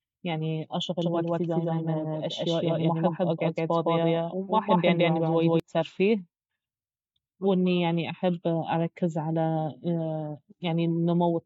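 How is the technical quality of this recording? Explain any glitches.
The recording has one clear fault, a doubled audio track from 1.02 to 5.60 s. A second copy of the speech, about as loud as the original, trails it by roughly 150 ms. It is likely a slower capture path mixed back in. The result is a dry slapback with no room tail that starts and stops abruptly. On a spectrogram each syllable appears twice, full-band and evenly offset, and the waveform shows matching envelopes stacked one behind the other.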